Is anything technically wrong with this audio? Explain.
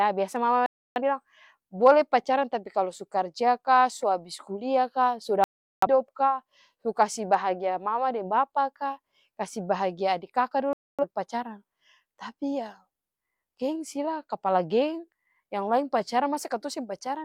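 Yes. The speech cuts abruptly to silence three times: just after "biasa mama" from 0.66 to 1.01 s, from 5.44 to 5.87 s, and from 10.73 to 11.05 s. Each hole lasts roughly a quarter to two fifths of a second. This is a digital broadcast dropout: the receiver lost or rejected a short run of corrupted frames and muted until clean ones arrived, so the speech in those gaps is simply missing.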